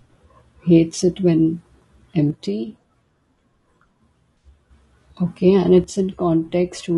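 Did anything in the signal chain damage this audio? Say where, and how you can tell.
Yes. Throughout the clip the speech has a rough, grainy texture, with a noisy haze between the harmonics and a top band that sounds thin and somewhat synthetic. This is low-delay AAC compression at the codec stage, likely AAC-ELD as used in video calls. Its short frames resolve the pitch structure coarsely, and the damage is plainly audible, which fits a low bitrate of around 32 kbps.

From 2.30 to 4.70 s, and again from 5.84 s to the end, the level abruptly drops by about 6 dB; the first time it returns, the second time it stays down. This is one channel dropping out, most likely a stereo channel lost. Once the pair is folded to mono, material common to both channels loses half its amplitude. The clean, sudden step at each boundary marks a lost channel rather than a gain change.

Between 4.38 and 4.48 s there is a brief smeared, noisy patch lasting about 60 ms. 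This is AAC frame loss with concealment. The length fits about three consecutive lost frames. The decoder filled the gap by reusing the last good spectrum with scrambled phase, so the sound blurs instead of cutting out. It falls inside the first channel dropout.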